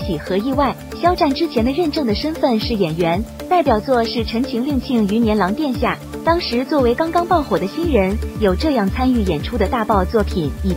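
From start to finish the sound carries a grainy, gritty distortion that rises and falls with the signal itself. Quieter passages turn rough, and the faintest moments sputter or collapse toward silence. This is likely low bit depth without dither: the samples were rounded to very few levels, which fits roughly 7 bits, leaving an error floor only around 30 dB below the signal.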